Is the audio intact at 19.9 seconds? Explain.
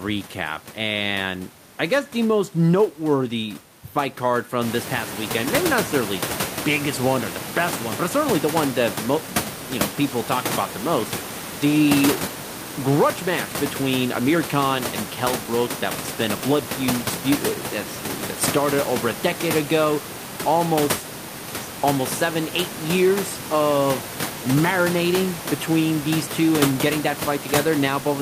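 Yes, the speech at 19.9 seconds is intact, with no fault at that moment.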